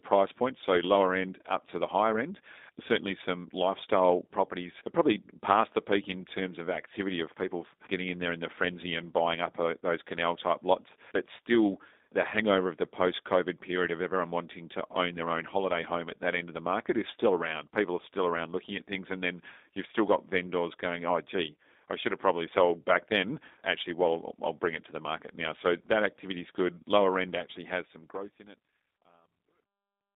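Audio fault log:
Throughout: G.729 codec, speech confined to roughly 250 Hz to 3.7 kHz with a rough, synthetic buzz, fitting 8 kbit/s pulse-based coding; the spectrogram shows a hard ceiling and smeared harmonics.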